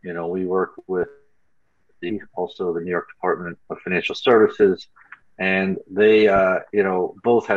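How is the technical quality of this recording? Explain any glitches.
The recording has two short bursts of DAB burbling, at 0.75 to 1.04 s and again at 3.71 to 3.81 s. Weak reception let bit errors slip past the error correction into the MP2 audio, so damaged samples put short blips of noise into individual sub-bands and damaged scale factors made sub-bands leap in level for up to a frame. That produces a burbling of blips and level jumps over the programme, and the second burst sounds denser, which fits a higher error rate of a fraction of a percent.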